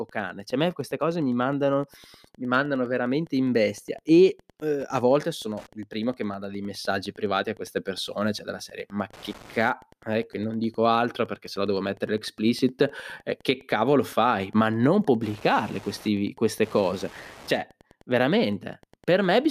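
Wi-Fi interference ticks through the whole speech clip at one pulse every 102.4 ms, roughly 30 dB below the speech, from a nearby radio's beacon being rectified by the audio circuit.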